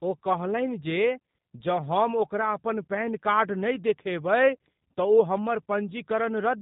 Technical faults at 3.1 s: G.729 codec

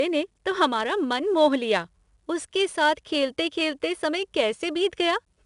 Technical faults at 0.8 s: 4-bit ADPCM compression

